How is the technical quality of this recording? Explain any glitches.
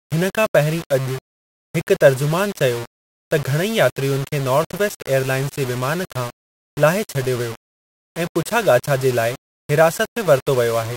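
The technical quality is poor. Grainy distortion runs through the whole recording. This is low bit depth without dither. The grit sounds like about 5 bits, likely rounded with no dither. The error tracks the speech, sitting roughly 15 dB below it. Quiet syllables turn rough, and the softest passages sputter or drop out.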